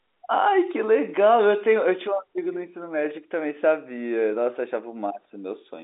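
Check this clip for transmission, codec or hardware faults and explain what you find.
No transmission, codec or hardware faults can be heard in this speech recording. It has come through a G.711 telephone coding path, which keeps it inside the narrow telephone band with nothing audible above about 3.8 kHz, giving the familiar boxed-in phone sound.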